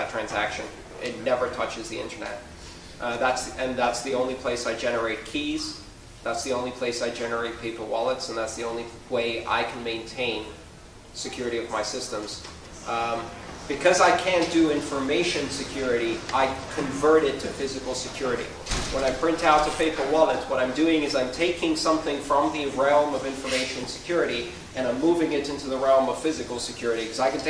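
Nothing goes wrong anywhere along the way here; the audio just runs its course without a single glitch worth pointing out.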